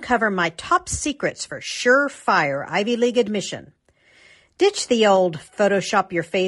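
Throughout the speech, the voice sounds rough and grainy. Noise fills the gaps between the harmonics, and the top band sounds thin and synthetic. This is likely low-delay AAC compression. Its short frames resolve pitch poorly, and the damage points to a bitrate near 32 kbps.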